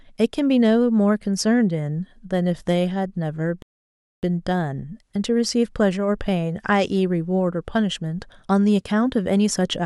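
It's a speech clip with a playback stall: at 3.62 s the audio just drops out and stays silent until 4.23 s, a gap of about 0.61 s, before carrying on. Most likely the player ran dry of buffered data or its thread got blocked.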